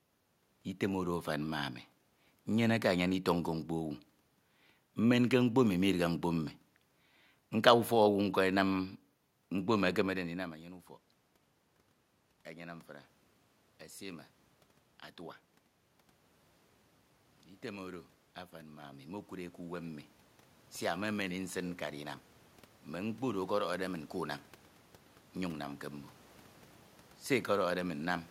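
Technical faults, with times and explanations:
17.63 to 24.43 s, automatic gain rising: the level control decided the input was too quiet and slowly turned itself up, ending about 9 dB higher over nearly seven seconds. You can tell it's the gain and not the talker because the room noise climbs right along with the speech. The level shift around 10 s is different: that one's just the talker moving relative to the mic.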